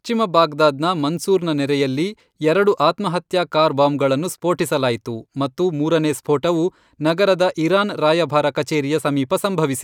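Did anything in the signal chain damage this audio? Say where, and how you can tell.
No, nothing in the signal chain has left an audible mark on this speech recording, which keeps a steady, continuous signal with no breaks, level jumps or added noise at any point.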